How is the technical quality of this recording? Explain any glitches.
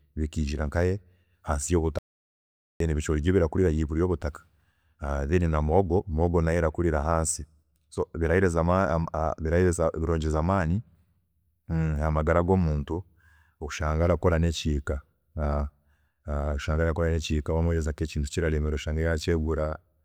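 One glitch stands out. From 1.99 to 2.80 s, an audio dropout to silence: the input signal was likely lost while recording continued writing zeros. Speech cuts off after "bikiijira nkahe hansi" into 0.82 s of total silence with no room tone, then resumes mid-flow at "ebicoori byo birakurira higuru".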